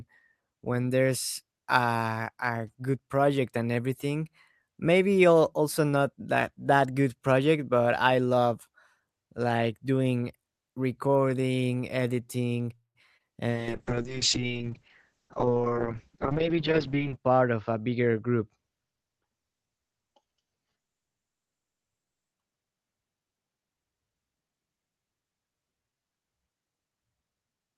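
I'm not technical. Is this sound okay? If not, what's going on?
No. Around 12.75 to 12.97 seconds there is a call audio freeze, likely from delayed network data: the sound stretches into a fading buzz, then goes silent briefly before resuming.

At 13.17 to 13.22 seconds, short concealed packet loss: a tiny piece never arrived, so the phone guessed the gap, leaving a quick smear or wobble.

From 13.51 to 22.39 seconds, a call bitrate drop: the connection weakened and the phone sent far less detail, so the sound turns rough and muffled, losing everything above 8 kHz.

Between 15.29 and 16.73 seconds, a jitter buffer speed-up: the phone trimmed backed-up audio to catch up, so the sound runs about 14% faster at the same pitch.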